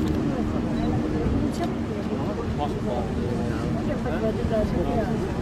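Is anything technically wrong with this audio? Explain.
No, nothing technically wrong stands out here; it all sounds perfectly fine to me.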